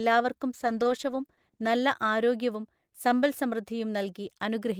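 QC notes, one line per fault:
0.52–1.75 s, call bitrate drop: for just over a second the speech goes rough and watery and the top end dulls, which points to the encoder being squeezed from around 32 kbps down to about 13 kbps after the bandwidth estimate fell, coding coarser and trimming highs until it recovers.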